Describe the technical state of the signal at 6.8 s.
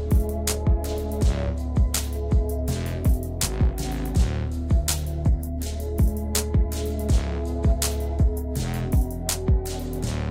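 At 6.8 s the signal is intact, with no dropout, distortion, glitch or other audible fault at that moment.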